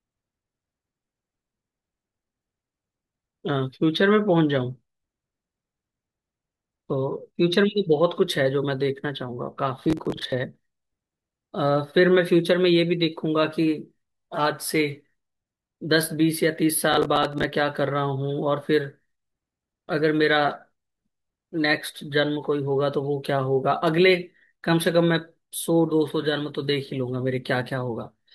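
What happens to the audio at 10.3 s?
At 10.3 s the audio is in the last moments of a burst of processor overload crackle that runs from about 9.85 to 10.32 s. The processor falls behind and misses a run of short buffers. Each miss replays a scrap of old audio with hard edges, which fits buffers of roughly 10 ms and about fifteen misses. The speech takes on a gritty, tearing crackle. On a spectrogram this shows as dense vertical broadband streaks. The waveform shows abrupt steps and repeated short segments.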